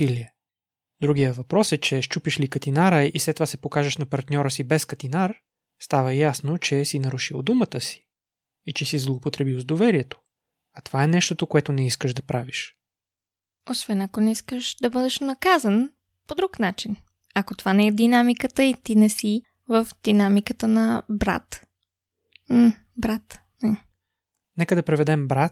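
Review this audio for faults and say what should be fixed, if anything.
Nothing stood out on listening to this speech recording, so there is nothing that needs fixing.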